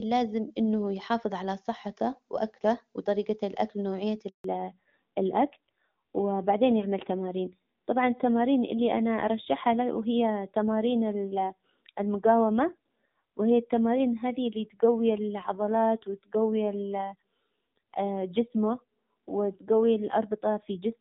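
At 4.28 s the sound cuts out for 160 ms, until 4.44 s. This is a handover gap. The call switched networks, and no frames arrived during the change. The sound dies away quickly, leaving silence. Whatever was said then is gone.

From 4.44 s to the end comes a fallback to narrowband. Before this, the HD Voice link sounds clear, which fits AMR-WB near 23.85 kbit/s. Afterwards nothing remains above 4 kHz. The speech turns dull and rougher, which fits AMR-NB at 7.4 kbit/s.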